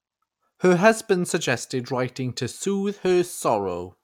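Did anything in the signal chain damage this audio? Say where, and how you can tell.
No, nothing in this speech recording stood out on listening as damage from any stage of the signal chain.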